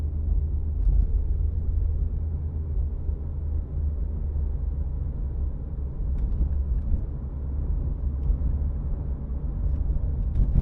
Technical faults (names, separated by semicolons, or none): none